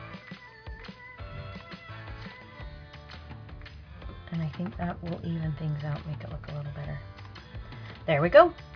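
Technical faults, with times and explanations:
No technical faults are audible.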